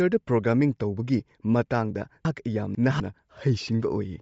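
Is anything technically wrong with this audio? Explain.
Yes, two problems. All the way through, the speech has a breathy, grainy edge with the top end thinned out and filled with hiss. That's most likely Bluetooth LC3 compression: the codec drops much of the upper spectrum and fills it with noise, which fits a setting around 32 kbps with 10 ms frames.

Then, from 2.25 to 3.0 s, there are chunks out of order. One 250 ms chunk lands two chunks late, so the sound jumbles briefly, with three hard joins where mismatched pieces butt together. Nothing's missing, just shuffled.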